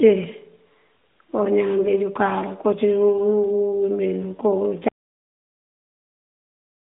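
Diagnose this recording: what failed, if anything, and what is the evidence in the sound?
The speech sounds like a narrowband phone line, roughly 200 Hz to 3.6 kHz, consistent with AMR-NB at about 12.2 kbps. At 4.88 s it hits an audio dropout to silence: the sound stops mid-flow and stays silent, with no room tone, through to the end. The likely cause is a lost input or link upstream of the recorder, which kept writing silence.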